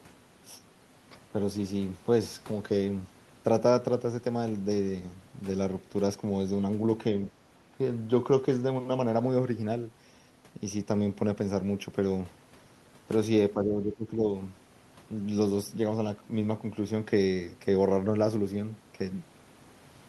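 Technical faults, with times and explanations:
13.54 to 14.23 s, speech suppressed in double talk: for roughly 0.7 s the speech level sinks by around 10 dB and then recovers. The likely cause is an echo canceller meeting simultaneous talk from the far end. Unable to tell the local talker from loudspeaker echo, it turned everything down. On the waveform the envelope visibly pinches inward across that span, and on a spectrogram the speech fades before returning to normal density.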